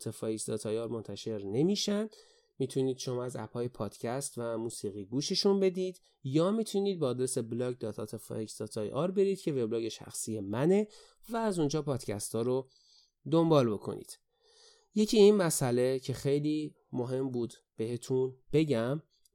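Nothing in this speech recording stands out as a technical problem, so there's no fault to point to at any moment.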